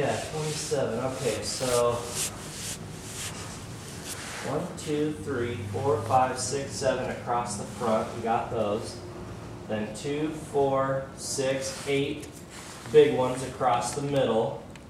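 From 1.58 to 1.75 s there is a short, irregular burst of crackle and scratching, the mark of loose connector crackle. A worn or dirty contact in the signal path is opening and closing in quick succession, chopping the audio on and off. The spacing of the bursts is uneven. Digital clicks or dropouts sound cleaner and more regular by comparison.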